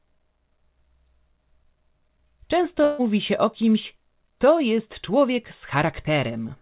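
At 2.84 s the speech breaks up in a burst of packet loss lasting until about 3.01 s. Roughly 150 ms of audio never arrived in time, and the receiver covered about 144 ms of the hole by extending the last sound and letting it fade, so the speech turns into a short held buzz or hiss that dies away. When the audio resumes, it picks up further along, and the section in between is simply gone. The narrowband call path, with nothing above 4 kHz, gives the whole clip a telephone-like dullness.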